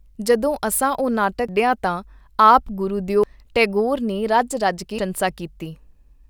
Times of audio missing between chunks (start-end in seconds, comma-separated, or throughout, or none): 1.49, 3.23, 4.99